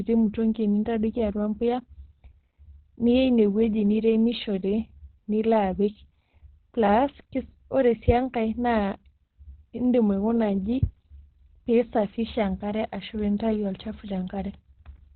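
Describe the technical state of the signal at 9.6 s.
At 9.6 s, as throughout, the speech sounds muffled and hoarse, with nothing above 4.3 kHz on a spectrogram. This is likely Opus compression in narrowband speech mode at a low bitrate near 12 kbps.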